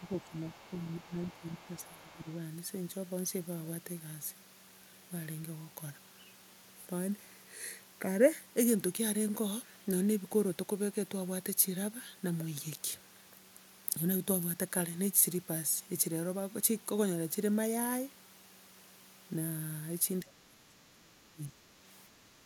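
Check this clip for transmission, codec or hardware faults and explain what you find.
Three kinds of fault turn up in this speech recording: the talker being ducked during double talk, the far end bleeding into the microphone, and two isolated digital clicks.

Speech suppressed in double talk, from 0.0 to 2.29 s and again from 20.22 to 21.6 s. The talker's level sags by roughly 15 dB in the first stretch and around 25 dB in the second. This is likely an echo canceller that could not tell near speech from loudspeaker echo and attenuated both.

Other side's voice leaking through, from 0.03 to 0.74 s and from 0.9 to 2.34 s. A faint second voice sits underneath, about 25 dB and then about 30 dB below the talker. The likely cause is far-end audio from the loudspeaker surviving incomplete echo cancellation.

Bit error spike at 3.19 s and at 12.90 s. Each is a single sharp broadband tick with no relation to the surrounding speech. 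A flipped bit made one sample jump by a power of two and snap back in the first case, and two adjacent samples in the second.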